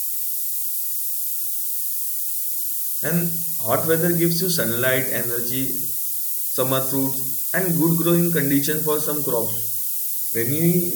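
Low bit depth with noise shaping runs throughout: 4-bit samples, with rounding error pushed upward, leave a thin hiss roughly as loud as the speech and climbing steeply toward the top.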